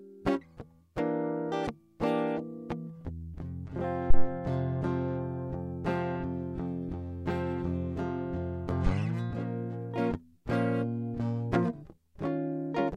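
At 4.10 s a phantom power thump cuts into the music. It is a deep, low-frequency knock that peaks at about -8 dBFS and has died away by 4.28 s, with the bulk of its energy gone within roughly 40 ms. What went wrong is a supply being switched on or off on a live input: the sudden voltage step charges through the coupling capacitors and reaches the signal path as a single heavy pulse.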